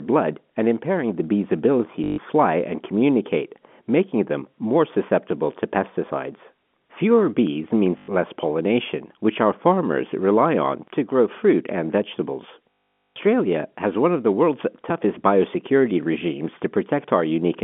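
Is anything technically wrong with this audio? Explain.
Yes. Packet loss with the last packet repeated occurs at 2.04–2.18 s after "impairing the bee's ability", at 7.98–8.08 s before "less pollination which our", and at 12.75–13.16 s after "grow fruit and vegetables". Lost packets were filled by replaying the previous one, so the repeats buzz near 50 Hz, which fits 20 ms packets. The longest gap, 460 ms, gives a robotic stutter over the narrow telephone-band sound.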